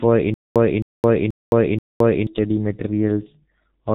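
From the first moment the speech has the muffled, hoarse quality of the G.723.1 codec, and the damage is heavy. Nothing comes through above about 3.8 kHz, so consonants smear together and the voice loses its air. The coarse, slow-moving voice model makes the timbre rough and grainy, which fits a bitrate of roughly 6 kbit/s, where almost all the detail is traded away to keep the stream tiny.

Between 0.34 s and 2.27 s there's a stutter with silent gaps. The same 265 ms fragment plays four times at a steady 482 ms rhythm, with about 216 ms of dead digital silence after each repeat. The likely cause is the player or stream stalling, replaying its last chunk on each retry and then running dry, so whatever speech belonged in that stretch is simply gone.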